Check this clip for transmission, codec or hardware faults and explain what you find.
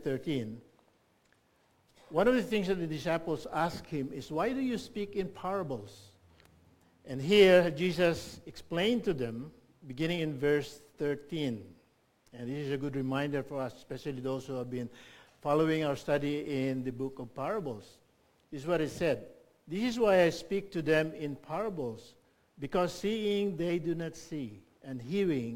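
One fault runs through the whole clip: crude rate conversion. A gritty, inharmonic fizz tracks the louder, brighter moments, roughly 30 dB down. Samples were simply picked or skipped without filtering, which fits a 48 kHz to 44.1 kHz change.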